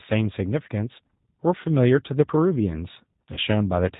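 Throughout, the speech carries G.729 codec colouring: nothing above 4 kHz, and a rough, synthetic edge from pulse-based rebuilding at what sounds like 8 kbit/s, unlike plain band-limiting. At 3.34 to 3.40 s, VoIP packet loss concealed by the speech codec stretches the sound into a fading buzzy tone or coloured noise, and weakness lingers afterwards rather than cutting cleanly like a dropout.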